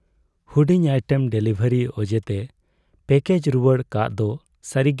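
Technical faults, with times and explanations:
Nothing in this speech recording stood out as a technical problem on listening.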